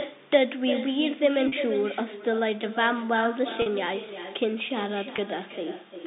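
From the start, the speech is shadowed by echo with no canceller. The far end's loudspeaker feeds its microphone, and nothing cancels the return. About a third of a second after each phrase, a thinner copy follows, about 10 dB down.

At 1.48 to 1.52 s and 3.62 to 3.66 s there is packet loss with pitch repetition, each gap 40 ms, which fits two lost packets. The receiver repeats the last pitch period to fill the hole. Each gap sounds like a brief, buzzy held tone. At 5.16 to 5.18 s a 20 ms gap, likely a single packet, is bridged the same way, as a shorter buzz. The telephone band tops out near 3.7 kHz.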